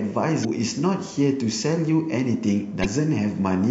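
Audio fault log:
0.41–0.45 s and 2.81–2.86 s, damaged data in a compressed stream: two brief glitches of about 40 ms each break into the speech. Corrupted bytes in those stretches left the decoder misreading the frames and losing sync until it found a valid header again.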